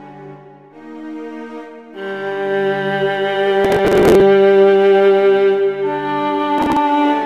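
Processor overload crackle tears through the music at 3.65–4.21 s and 6.58–6.77 s. Dozens of buffers of around 10 ms each are skipped, making gritty bursts rather than one clean dropout.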